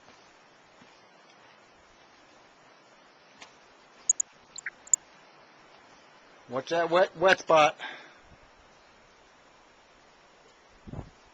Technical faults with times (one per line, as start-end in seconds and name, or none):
0.00-11.33 MP2 compression
3.97-4.96 DAB burbling
7.05-7.45 DAB burbling